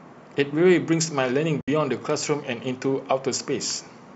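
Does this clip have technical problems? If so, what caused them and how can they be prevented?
Yes. There is one fault in this speech clip, an AAC frame loss with muting. From 1.61 to 1.68 s the sound drops into a hole of about 70 ms. That span fits a run of about seven consecutive short frames going missing. The decoder filled them with a zeroed spectrum. Overlapping windows fade the speech out and back in at the edges, so the gap has soft sides. The light coding texture around it is likely from low-delay AAC compression. Adding forward error correction or retransmission, or using packet loss concealment that extrapolates from neighbouring frames, would prevent the audible hole.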